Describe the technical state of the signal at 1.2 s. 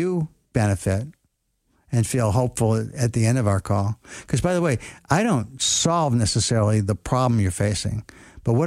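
At 1.2 s the speech signal is intact, with no dropout, clipping, glitch or other technical fault at that moment.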